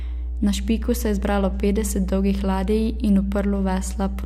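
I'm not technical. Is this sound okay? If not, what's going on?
No. From start to finish there is a steady, low buzzing drone underneath the speech, and it is loud, nearly as loud as the talking itself. This is mains hum: electricity from the power supply is leaking into the recording, often through a grounding problem between connected equipment or from a nearby transformer. Here it sits at 60 Hz, the rate of the power supply, which gives it that constant deep buzz.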